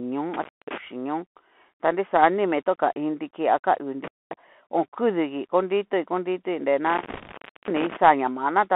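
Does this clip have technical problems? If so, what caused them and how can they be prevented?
Yes. The whole clip passes through a Bluetooth CVSD headset codec, limited to roughly 200 Hz to 3.4 kHz. Its one-bit adaptive step cannot keep up with loud, bright sounds, so sibilants turn scratchy and a granular hiss sits under the speech. A wideband Bluetooth profile such as mSBC or a wired microphone would avoid this.

Intermittent contact cuts the sound out at 0.34 to 0.78 s, 4.04 to 4.33 s and 6.87 to 7.97 s. Each cut has crackle at its edges. The line stays open for about 0.24 s, 0.24 s and 0.52 s, leaving faint hiss. Reseating or replacing the loose plug or cable prevents it.

Bit errors on a Bluetooth voice link from 7.10 to 7.34 s add a rushing crackle over the speech. The error rate is around one percent. Each flipped CVSD bit shifts the waveform only slightly, and its effect fades quickly, so there are no sharp clicks. 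Keeping the headset close to the receiver, away from 2.4 GHz interference, prevents it.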